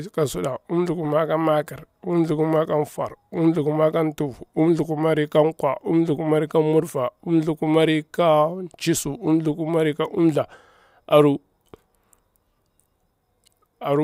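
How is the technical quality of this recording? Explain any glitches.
The technical quality of this recording holds up well, with no glitches to explain.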